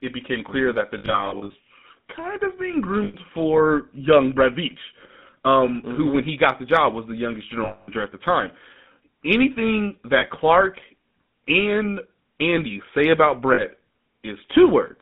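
Throughout, the speech passes through the GSM full-rate codec, which rebuilds each voice from a vocal-tract model driven by sparse pulses, leaving a band of about 150 Hz to 3.6 kHz and a plainly audible buzzy, gravelly roughness.

Lost GSM frames replace missing audio with the last good frame, repeated, giving a rough metallic ring: scattered from 0.98 to 1.55 s after "that the" (longest run around 70 ms), then 3.04–3.16 s before "for young", 7.64–7.90 s, 10.18–10.24 s, and 13.54–13.63 s after "say about".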